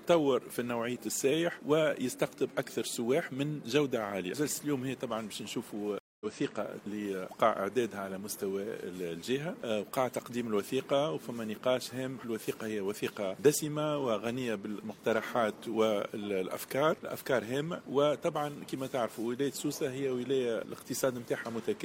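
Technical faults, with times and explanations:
5.99–6.26 s, stream reconnect: the connection drops, leaving 0.21 s of silence, then a freshly started decoder resumes roughly a fifth of a second further on, skipping material. The waveform shows a flat gap, and the spectrogram a blank vertical band.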